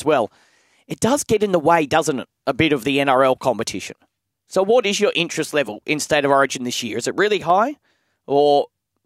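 From 7.38 to 7.5 s, after "it really", a sudden gain jump, likely an unramped gain change, instantly drops speech and noise floor together by about 4 dB, unlike gradual compressor pumping.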